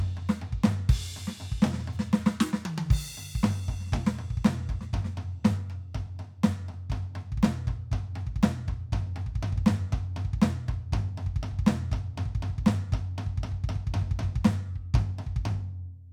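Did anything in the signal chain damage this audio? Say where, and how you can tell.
No, nothing in this music stood out on listening as damage from any stage of the signal chain.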